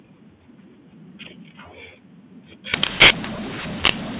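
From 2.74 s to the end, mu-law and A-law are mixed up: mu-law samples decoded as A-law scramble levels, making speech harsh and filling pauses with noise.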